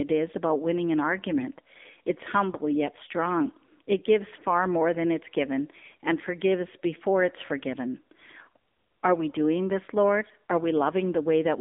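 Throughout, the speech carries AMR narrowband mobile codec damage: pulse-driven vocal-tract modelling leaves it buzzy and synthetic within a 250 Hz to 3.6 kHz band, which fits about 7.4 kbps, unlike plain band-limiting.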